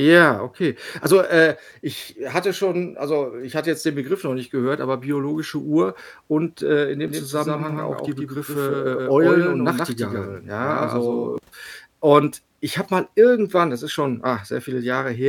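From 7.08 s to 11.38 s, just after "und äh in", the speech carries a doubled audio track: a second full-band copy trails about 150 ms behind, roughly 5 dB quieter, with no decay or room colour. It cuts in and out abruptly. The likely cause is a slower second capture path or an edit holding two copies out of step. On a waveform each syllable gains a smaller twin shortly after it. On a spectrogram every harmonic pattern repeats, slightly offset in time.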